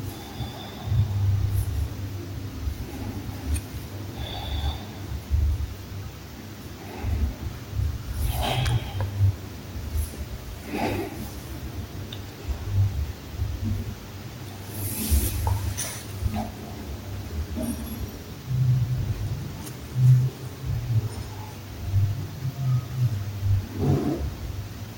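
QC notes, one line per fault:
No fault found for these QC notes.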